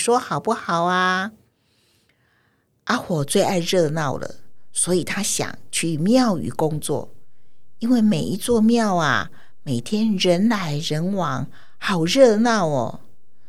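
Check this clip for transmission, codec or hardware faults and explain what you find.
One hardware fault is present. At 3.21 s a DC step shifts the zero line by about -33 dBFS and holds to the end, giving one low thump while the speech continues unbroken, unlike a dropout.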